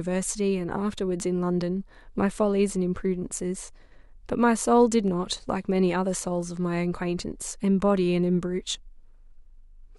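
At 5.08 s the speech carries a single sharp click, and it is most likely dropped samples: a fraction of a millisecond of the stream goes missing, so the waveform leaps straight from one value to a later one. Nothing audible is removed, which separates it from a dropout, where a stretch of sound falls silent. Instead the abrupt step spreads energy across every frequency at once, heard as one isolated tick rather than a gap.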